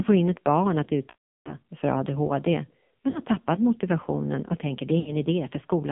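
Throughout, the speech sounds buzzy, synthetic and boxed in, with nothing above about 3.5 kHz and little below 150 Hz. This is heavy damage from the AMR narrowband mobile codec, whose 8 kHz sampling and pulse-driven vocal tract model, at a low mode around 6 kbps, strip detail and roughen the voice.

From 1.10 to 1.56 s the sound smears into a drawn-out tone that fades to silence, then returns weak. Shorter dips and warbles follow at 3.10 to 3.20 s and 5.00 to 5.16 s. These are lost AMR speech frames, where the decoder repeated its last good settings with falling gain.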